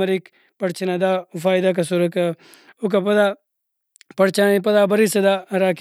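No technical faults are audible.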